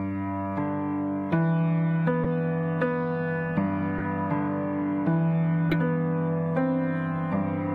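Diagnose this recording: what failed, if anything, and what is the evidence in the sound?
The codec stage failed: corrupt frames were decoded and played. Three short chirp-like bursts occur at 2.23 to 2.26 s, 3.98 to 4.02 s and 5.70 to 5.76 s, each spanning a few frames and peaking near -10 to -15 dBFS. Damaged bits gave the decoder wrong gains or misread codes, so energy landed at the wrong frequencies. A spectrogram would show brief vertical blocks of misplaced energy. The waveform would show matching short spikes.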